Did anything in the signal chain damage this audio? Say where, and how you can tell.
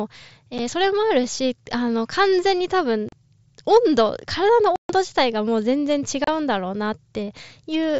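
Yes: unconcealed Bluetooth headset packet loss on the headset-to-phone link. Abrupt gaps at 0.58, 3.09–3.13, 4.76–4.90 and 6.24–6.28 s, where lost packets were replaced by silence with no concealment.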